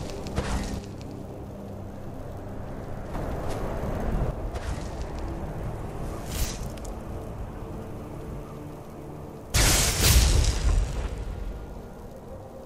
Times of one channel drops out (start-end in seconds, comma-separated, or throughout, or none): 0.79-3.14, 4.31-12.65